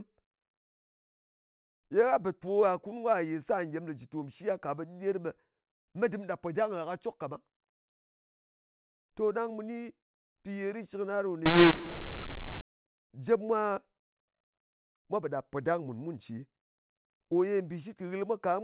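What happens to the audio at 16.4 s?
At 16.4 s the speech continues intact, with no fault, carried as usual by the G.711 mu-law telephone path with its 4 kHz ceiling.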